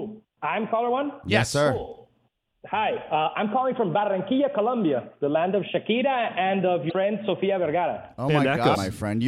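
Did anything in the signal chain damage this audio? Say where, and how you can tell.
Yes. At 6.89 to 6.92 s and again at 8.74 to 8.77 s there is a brief glitch, about 30 ms each, where the sound skips ahead. The stage is the codec, and the cause is likely a broken MP3 bit reservoir. Frames were dropped, so the next frame reached back for borrowed data and decoded bytes from another frame. The span matches roughly one 26.1 ms MP3 frame.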